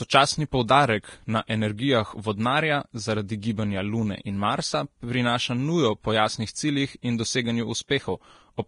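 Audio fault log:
Throughout: Vorbis compression, hissy and grainy speech with roughened tones and nothing above 10.6 kHz, likely from heavy low-bitrate coding, around 31 kbps.
7.88–7.91 s: pre-echo, a brief 30 ms hiss smears in before a sharp attack as block-spread quantisation noise leaks into the quiet moment ahead of it.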